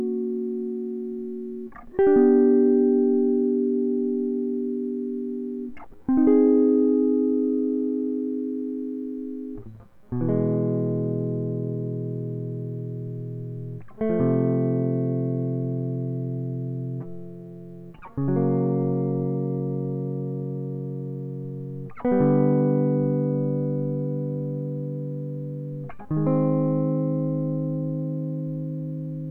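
No technical faults can be heard anywhere in this music recording.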